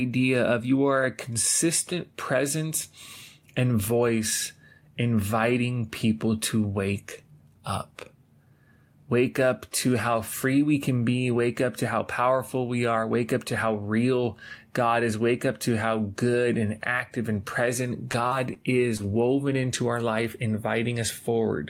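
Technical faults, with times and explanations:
18.11 to 19.01 s, short concealed packet loss: four brief gaps, at 18.11, 18.27, 18.53 and 18.97 s, each about 20 ms of audio lost except 40 ms at 18.27 s. The receiver patched each by extending the preceding sound and blending back into real audio. The first two follow "and active and present", and the last comes just before "woven into our life". Each patch is heard as a small smear or wobble in the speech.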